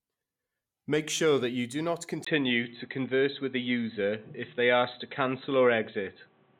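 At 2.25 s there's a 20 ms gap. From there to the end, the speech goes boxy with nothing above 4 kHz, its level shifts by around 5 dB, and new background noise sits roughly 35 dB below it. That's likely the input switched to a poorer device.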